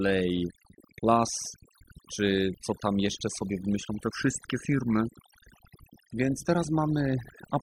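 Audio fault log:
Throughout: overdone noise removal. The noise reduction on this speech was set far too strong. Any frequency band sitting near the tool's idea of the noise floor gets pushed right down or switched off. The quieter parts of the voice fall below that line and vanish with the noise. Between phrases the background drops, breaking up into small twinkling specks.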